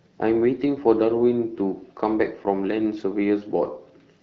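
Nothing goes wrong in this speech recording, which comes through the way AMR wideband (HD Voice) at 12.65 kbit/s normally does, with just the light coding character that rate brings.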